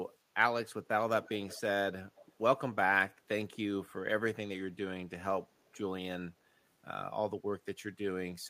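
Short echo leaks run through this speech at 1.24–1.32 s, 1.48–1.6 s, 2.15–2.29 s and 5.65–5.79 s. Each is a faint, delayed copy of the voice, trailing about 240 ms behind. The scraps are brief and quiet, around 20 to 25 dB under the speech early on and fainter still at 5.65 s. The likely cause is a far-end loudspeaker whose echo canceller let some of the pickup slip back down the line.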